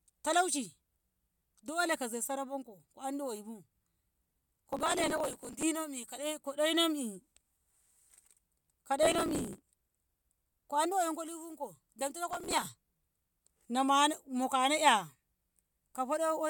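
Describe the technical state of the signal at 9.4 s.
At 9.4 s the speech is inside a burst of processor overload crackle, running from 9.03 to 9.79 s. The processor keeps missing deadlines for very short buffers, around a millisecond and a half. Each miss drops a sliver of audio. The many hard-edged gaps merge into gritty crackle.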